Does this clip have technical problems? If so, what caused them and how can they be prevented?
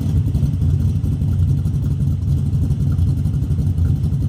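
Yes. The whole clip has a wrong sample rate fault: everything runs about 1.38 times too fast, and pitch rises with it by about 5.55 semitones. The samples are played back at a higher clock rate than they were captured at, with no resampling, so duration shrinks and frequencies scale up by the same ratio. That ratio fits material recorded at 32 kHz being played at 44.1 kHz. To prevent it, carry the true sample rate in the file header and resample explicitly whenever the playback rate differs.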